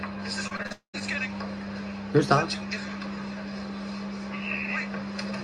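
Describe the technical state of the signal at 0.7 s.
At 0.7 s the signal sits inside a stretch of repeated packet loss (robotic sound) running from 0.47 s to 1.02 s. Five short holes fall in that half-second, the longest 38 ms, and each is patched by extending the preceding audio before the next hole arrives. Roughly 22% of the span is concealed material, which gives the sound a choppy texture with small pieces missing.

Just after the queried moment, from 0.72 s to 0.95 s, the audio gives way to what is likely a long network dropout. The receiver stretches the last sound into a fading buzz for about 0.21 s, then leaves roughly 0.12 s of silence. The lost section is never played, and the audio resumes after 0.95 s with that portion gone.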